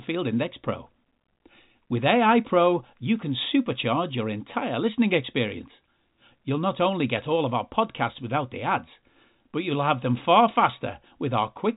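Listening closely to the speech, which comes over an ordinary telephone-band line with nothing above 3.8 kHz, nothing stood out at any point.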